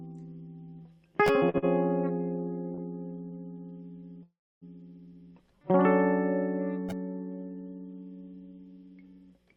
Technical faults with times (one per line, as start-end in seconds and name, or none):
1.49-1.64 short stall from a late packet
2.74-2.80 short stall from a late packet
4.23-4.63 call audio freeze